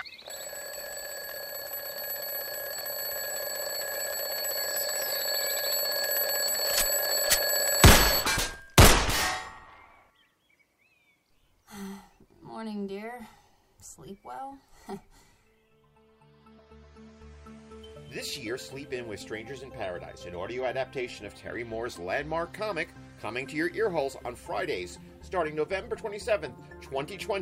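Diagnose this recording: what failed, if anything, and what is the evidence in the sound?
Nothing failed; no faults are audible anywhere.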